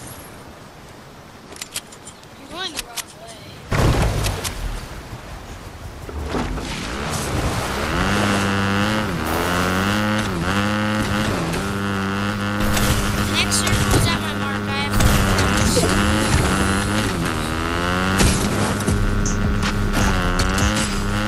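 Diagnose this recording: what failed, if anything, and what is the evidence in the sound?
Nothing in the chain, from the analogue wiring and converters through processing, transport and playback, has left any audible trace of failure in this recording.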